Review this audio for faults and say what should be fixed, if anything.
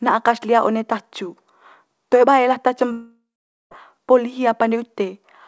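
Long network dropout, 2.92 to 3.73 s: the speech gives way to a fading buzz continuing the last sound, then about 0.46 s of near silence, and resumes with 0.8 s of audio gone, likely from packets lost in transit. Preventing it needs a steadier network link or forward error correction and redundancy on the call stream.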